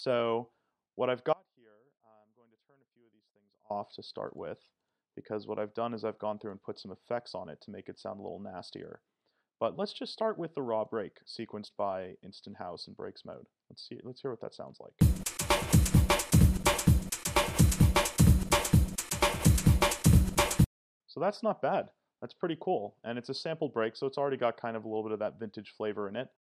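Right at 1.33 s there's an audio dropout to a faint residue: the sound drops out abruptly and doesn't properly return until 3.70 s, so about 2.37 s is missing. It isn't true silence. What's left in the gap is a faint trace of the sound, around 30 dB below its normal level. The likely cause is the main signal being lost upstream while the path after the break stayed live and passed through that weak leak.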